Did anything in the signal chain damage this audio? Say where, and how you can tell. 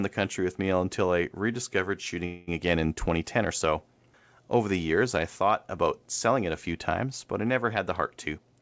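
Yes. At the network and buffer stage, delayed packets likely emptied the jitter buffer from 2.26 to 2.49 s, before "again in": the speech holds as a fading buzz or hiss, then resumes 216 ms late.

The jitter buffer speed-up shows in call processing: after "times but I never", from 7.99 to 8.60 s, removed pitch periods totalling around 70 ms make speech run 109% fast at unchanged pitch.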